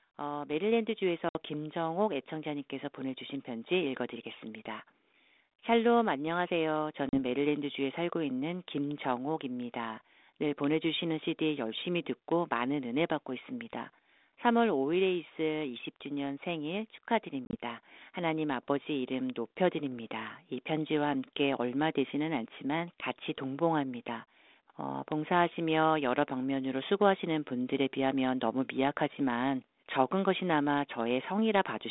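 From 0.17 to 4.97 s the speech and the background swell together, climbing by about 6 dB. That is automatic gain rising: the gain control judged the input too quiet and raised its gain step by step over those few seconds.

Hard-edged holes of silence cut the speech at 1.29 s (60 ms), 7.09 s (40 ms) and 17.45 s, where 60 ms goes missing in gaps scattered over 80 ms, the longest 30 ms. After each hole the speech comes back with a touch of distortion before settling. This is packet loss on an ADPCM call. Lost packets were filled with silence, and the decoder's adaptive predictor and step size drifted away from the sender's until they resynchronised. The narrow telephone band points to G.726 at 32 kbit/s.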